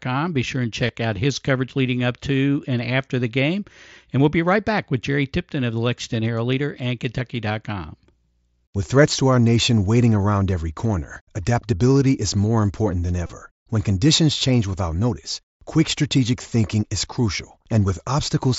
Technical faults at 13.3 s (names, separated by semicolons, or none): concealed Bluetooth headset packet loss